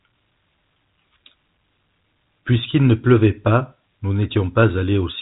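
No technical faults can be heard in this speech.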